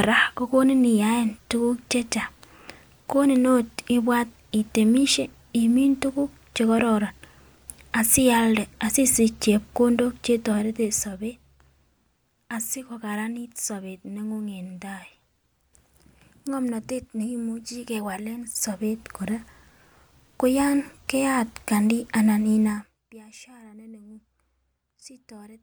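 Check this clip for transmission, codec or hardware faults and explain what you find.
Zipper noise shows up three times. After "asialde asisich chepkondok", 10.26–11.66 s drops roughly 10 dB in 2 dB jumps, about four a second; 18.16–19.27 s climbs back similarly. After "koyon keyat kandii anan", 22.66–22.99 s falls around 25 dB quickly. Unsmoothed gain steps each click, giving audible ticking.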